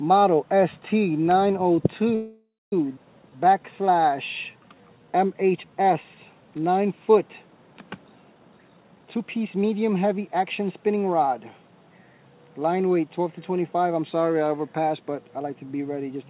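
The audio arrives over a call path band-limited to 4 kHz, which fits a narrowband G.711-style codec. A call audio freeze runs from 2.15 to 2.73 s. The last sound is stretched into a fading fill that ends in about 230 ms of silence, likely from packets held up until the jitter buffer ran empty, and the audio resumes with nothing lost. At 2.96 s a skip ahead jumps forward almost seamlessly, dropping roughly 0.4 s of audio. Jitter buffer slow-down follows from 3.23 to 4.10 s at 88% speed (107 ms added) and from 4.52 to 6.16 s at 86% speed (234 ms added). Repeated pitch periods drag the sound out at unchanged pitch while the buffer rebuilds its reserve. From 8.35 to 10.47 s a jitter buffer speed-up plays at 126% speed, cutting roughly half a second of short segments so the audio sounds hurried at the same pitch.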